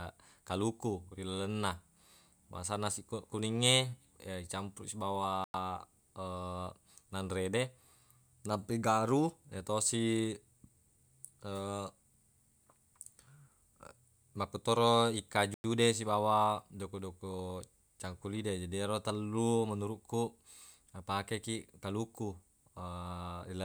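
The speech was delivered in 10-second chunks, leaving a gap between chunks. Each join inserts 100 ms of silence, at 5.44 to 5.54 s and again at 15.54 to 15.64 s, just before "de sibawa". Nothing is lost, but the speech is interrupted by short holes.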